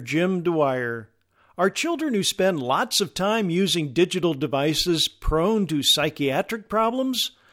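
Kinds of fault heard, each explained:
The speech signal shows no audible technical faults: level, continuity and timing all hold steady across the recording.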